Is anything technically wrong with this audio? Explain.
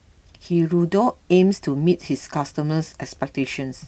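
Yes. The speech carries clock drift between sender and receiver throughout. The sender's clock runs roughly 2% slow, so the receiver's jitter buffer keeps draining and has to stretch the audio to avoid running dry. On a waveform the syllables look slightly elongated.

Repeated timing corrections run from 0.63 s to 3.20 s. The receiver keeps repeating short slices to stay in step, so this stretch plays at 97% speed and gains around 70 ms overall. The result, if audible at all, is a faintly dragging, unsteady tempo with small hiccups. A spectrogram shows tiny duplicated fragments at irregular spacing.

The Opus call path, whose spectrogram shows content ending at 8 kHz, is not at fault.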